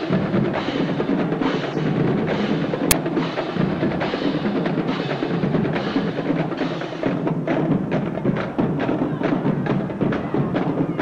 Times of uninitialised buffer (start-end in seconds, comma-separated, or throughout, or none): 2.91